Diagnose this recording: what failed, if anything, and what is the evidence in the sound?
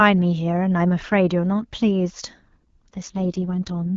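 AMR rate drop at the network stage, from 2.96 s to the end: the speech turns rougher and more synthetic with no gap or narrower band, which fits AMR-WB falling from 12.65 to 6.6 kbit/s.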